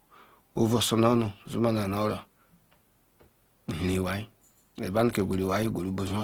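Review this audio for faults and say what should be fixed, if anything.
Opus compression damage is plainly audible through the whole speech clip. The sound is rough and grainy. Starved bands are filled with noise or copied from lower bands, so detail turns noisy rather than dropping out. Content still reaches about 20.2 kHz. The likely cause is a music-mode Opus encode at a very low bitrate, which fits 16 kbps. Encode at a higher bitrate to prevent it.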